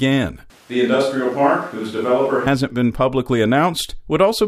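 From 0.50 to 2.46 s the close microphone likely dropped out, a switch to a distant microphone: speech turns roomy and thin, with faint room noise, at nearly unchanged level.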